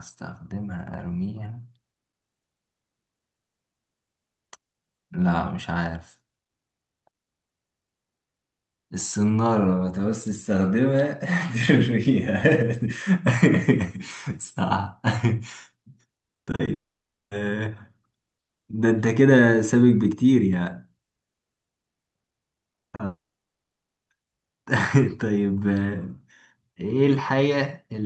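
Speech over an Opus call path whose top end stops near 8 kHz. Repeated packet loss (robotic sound) hits at 16.33–16.69 s and 22.69–23.01 s: five, then four, gaps of up to 40 ms are patched by stretching the previous sound, leaving choppy speech. A long network dropout follows each, at 16.73–17.33 s and 23.05–23.99 s. The sound smears into a fading buzz, then falls silent for about 0.56 s and 0.81 s. This is likely a stalled stream whose audio never arrives, so speech resumes with that stretch missing.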